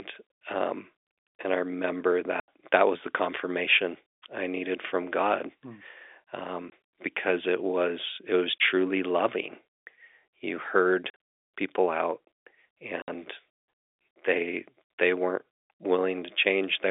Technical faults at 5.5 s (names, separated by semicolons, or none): none